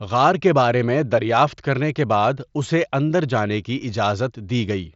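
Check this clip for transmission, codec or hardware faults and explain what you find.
Nothing stood out on listening to this speech clip, which comes through a Bluetooth mSBC headset link with the sound reaching up to about 7.7 kHz.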